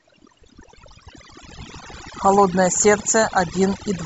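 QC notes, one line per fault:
Throughout: overdone noise removal. The noise reduction was set too strong, so frequency bands near the noise estimate are pulled far down or cut, taking quiet speech detail with them. The background drops and breaks up into twinkling specks. On a spectrogram, gaps between words show isolated flickering dots, and speech harmonics look patchy.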